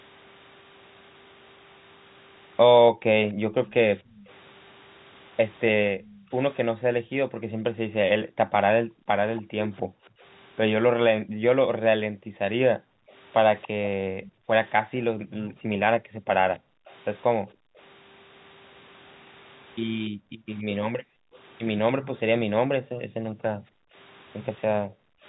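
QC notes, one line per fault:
2.92–3.68 s, 5.93–17.77 s and 20.1–25.24 s, background gated by the echo canceller: the room sound under the speech repeatedly dips or vanishes, falling by as much as about 40 dB. The gating covers under half a second in the first span, around seven seconds across the long middle span and about three seconds in the last. The canceller is clamping the microphone hard while the far-end loudspeaker plays, then releasing it, so the ambience pumps in and out.
3.72–4.29 s, 6.07–6.18 s, 9.36–9.42 s, 13.1–14.32 s and 16.58–17.81 s, echo leak: a faint delayed copy of the speech trails the original by 288 ms, sitting about 25 to 30 dB below it. It appears as brief scraps at 6.07 s and 9.36 s and as longer tails in the other three spans. The likely cause is the far side's speaker-phone echo canceller failing to remove all of what its microphone picked up and sending the remainder back down the line.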